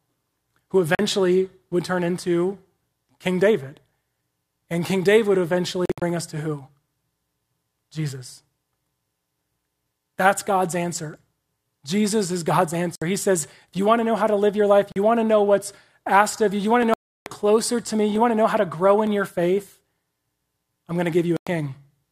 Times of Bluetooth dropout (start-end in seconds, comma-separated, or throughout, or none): 0.95-0.99, 5.85-6.02, 12.95-13.02, 14.92-14.96, 16.94-17.26, 21.37-21.47